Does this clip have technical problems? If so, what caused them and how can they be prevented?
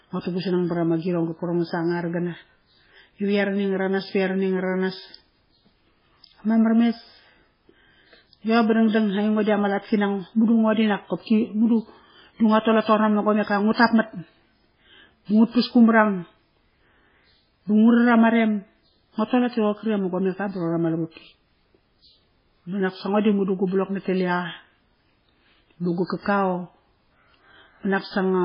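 Yes. Throughout, the speech sounds watery and swirly, with smeared consonant onsets and nothing above 5.3 kHz. The likely cause is heavy MP3 compression, which fits a bitrate near 16 kbps: short of bits, the encoder cuts the treble and lets weak frequency lines flicker on and off between frames. Encoding at a much higher bitrate, or keeping a lossless copy, would prevent this.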